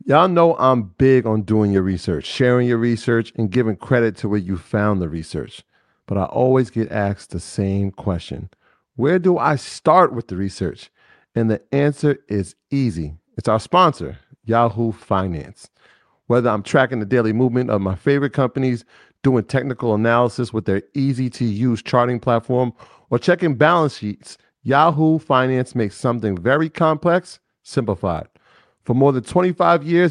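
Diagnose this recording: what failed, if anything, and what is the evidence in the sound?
Nothing failed: the recording shows no evidence of any fault in the sound.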